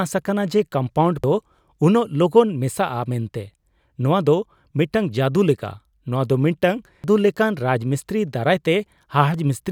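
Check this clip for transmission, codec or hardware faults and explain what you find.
One fault recurs in this speech clip: damaged data in a compressed stream, at 1.24, 7.04 and 9.34 s. Corrupted bytes make the decoder misread frames and hunt for sync, producing a brief glitch at each point.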